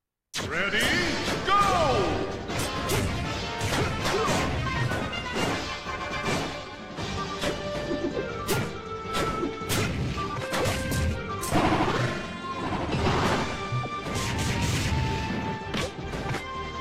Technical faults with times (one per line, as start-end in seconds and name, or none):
none